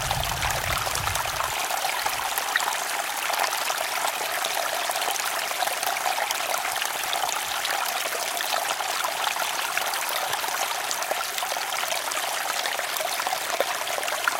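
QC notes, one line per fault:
4.09–5.57 s, 6.69–7.43 s, 8.92–10.03 s: chunks out of order. Segments of about 370 ms play after material that should follow them, late by three, one and two chunks respectively. Nothing is missing, but each run sounds jumbled, with three hard joins per run. On a waveform, abrupt level and shape discontinuities mark the joins. A spectrogram shows spectral content visibly reshuffled between the joins.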